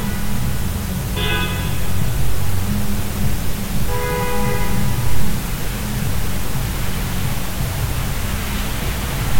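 Throughout, the audio shows low bit depth with dither: only 5 bits, dithered before rounding, leaving a steady, even hiss roughly 15 dB below the signal, without distortion.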